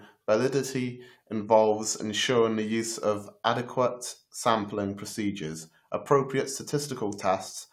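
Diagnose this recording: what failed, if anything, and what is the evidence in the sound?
Nothing failed here that I can hear; the speech runs along without a single fault at any stage of the chain.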